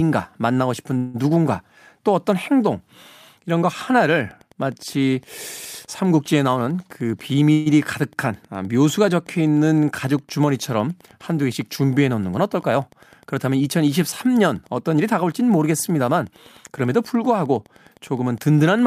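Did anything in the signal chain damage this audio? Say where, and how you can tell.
Yes. From 0.97 to 1.23 s and again from 7.52 to 7.68 s, the speech stalls while the last sound drags on as a fading buzz or hiss. It then resumes exactly where it stopped. This is a call audio freeze at the network stage, likely a jitter buffer running dry while packets were held up. It inserts about 167 ms and 137 ms of filler, with nothing lost.

Wi-Fi interference enters in the analogue wiring from 3.93 s to the end. A steady tick repeats every 102.4 ms, about ten per second. The audio circuit is rectifying a nearby radio's beacons and data bursts. The ticking sits about 35 dB below the speech.

A jitter buffer speed-up, in call processing, hurries the speech from 6.47 to 7.49 s at 110 percent and from 14.98 to 16.90 s at 109 percent. The pitch stays unchanged. The receiver cut pitch-period slices, roughly a tenth and a fifth of a second, to shrink excess buffered delay.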